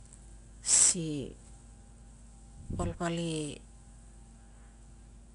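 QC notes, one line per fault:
Throughout, 4-bit ADPCM compression: coarse adaptive quantizer steps add gritty hiss tracking loud speech, roughening sharp onsets, at about 89 kbps.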